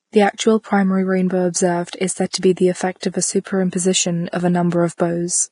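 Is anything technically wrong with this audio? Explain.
Yes. The speech is damaged by heavy lossy coding throughout, and there are three short pre-echo events.

The damage is most likely Vorbis compression at a low quality setting. Nothing is present above 10.6 kHz. The treble left below that is coarsely quantised, so fine detail turns into noise of similar energy. The result is hissy and grainy. Voiced tones sound roughened, and consonant onsets blur. This level of damage points to a low bitrate, around 31 kbps.

Pre-echo occurs at 1.90–1.93 s, just after "primary rainbow" and before "is said to be". It occurs again at 2.30–2.34 s, between "is said" and "to be the", and at 3.00–3.03 s, after "said to be the". In each case a sharp onset falls late in a transform block. The codec spreads that block's quantisation noise evenly across it. So a short hiss of about 26 to 33 ms leads into the attack, which sounds softened and smeared.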